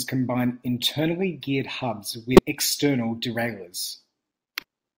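Damaged data in the compressed stream corrupts the speech twice. From 2.35 to 2.39 s, a stretch of the encoded bytes is wrong, so the decoder misreads those frames, loses sync and has to hunt for the next valid frame header before normal decoding resumes. The result is a short chirp, squawk, click or hole lasting about 40 ms. The same breakdown recurs from 4.59 to 4.63 s as a second brief blip of similar length.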